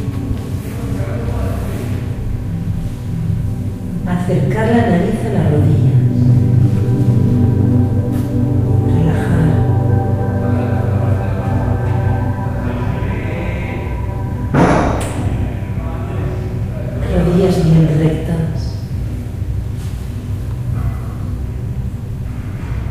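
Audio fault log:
5.39–7.81 s, 14.55–14.79 s, 17.17–18.07 s: hard clipping. The sound exceeds the stage's ceiling by about 3 dB, 7 dB and 5 dB, so peaks are sheared flat. The squared tops add high harmonics, heard as crackle on peaks and harsher fuzz in the brief 7 dB burst.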